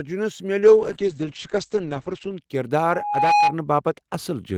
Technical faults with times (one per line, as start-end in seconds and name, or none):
0.61-2.47 call bitrate drop
2.82-3.55 loudspeaker feedback squeal